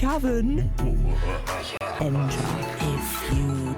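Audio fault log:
1.77 to 1.81 s, gap between stream segments: The sound drops out for about 34 ms with clean, hard edges, then picks up exactly where it left off. The timing of the two chunks either side didn't quite line up, so the player padded the hole with silence. Nothing was thrown away. The stream is cut into 2 s segments, and the hole points to a join between pieces rather than anything in the sound itself.
1.99 s, CD skip: A near-instant mute of just a few milliseconds, after which the sound carries on from a different point instead of continuing smoothly. That's the laser getting knocked off its track, whether from a bump or a flaw on the disc, and landing on another turn of the spiral. The player silences the output while it relocks, then resumes from wherever it landed, so you hear a discontinuity rather than a pause.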